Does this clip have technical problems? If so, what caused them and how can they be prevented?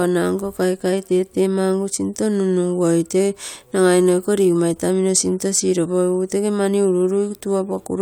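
No, nothing stood out as a technical problem when listening to this speech.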